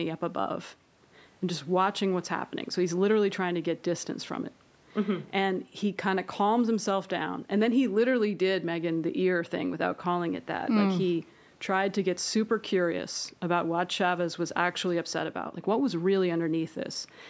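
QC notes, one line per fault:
Nothing to flag here, just speech through ordinary call microphone processing that stops at 8 kHz, with faint room noise sitting about 37 dB below it.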